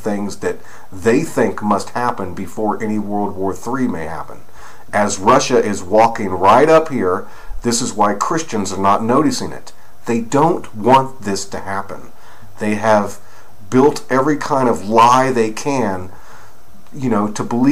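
Nothing in the recording stood out as a technical problem on listening.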